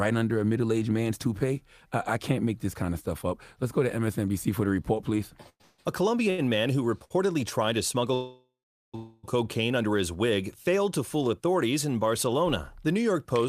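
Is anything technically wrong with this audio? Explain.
Yes. There are two call audio freezes, right after "for the report please" at 5.49–5.80 s and at 8.14–9.25 s. The last sound carries on as a fading buzz, then drops to silence for about 50 ms in the first and 430 ms in the second. Packets were likely held up in transit, draining the jitter buffer. Nothing is lost; the audio simply resumes later.

There are also two short stalls from a late packet, at 6.30–6.40 s just before "man who" and at 7.04–7.12 s. The jitter buffer briefly runs dry, so a sound gets held about 80 ms and 60 ms too long, with a slight buzz.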